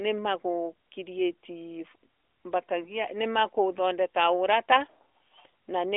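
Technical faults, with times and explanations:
2.84–2.91 s, lost AMR speech frame: The speech briefly dips or warbles, which points to a single 20 ms frame failing its check. The decoder covered the gap by repeating the previous pitch and vocal tract settings at reduced gain, then took a moment to recover full strength. On the waveform this is a short, slightly shrunken stretch of repetitive cycles. On the spectrogram, the harmonics below the line's 3.6 kHz ceiling smear flat and fade briefly before resuming.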